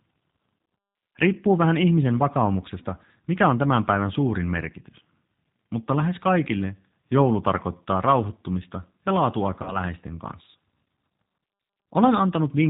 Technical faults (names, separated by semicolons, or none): G.729 codec; VoIP packet loss concealed by the speech codec